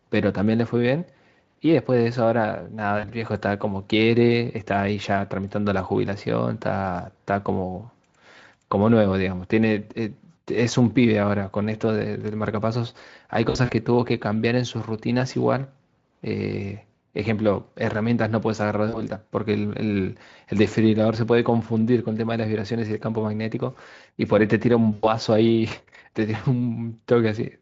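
At 2.99, 13.49, 18.89 and 24.93 s, VoIP packet loss concealed by the speech codec: with 40 to 100 ms missing, the Speex decoder stretches its last pitch and filter into a fading buzz or coloured noise, not the silent gap of a plain dropout. At 13.49 s, the loss scatters over 200 ms, and speech stays weak briefly afterwards.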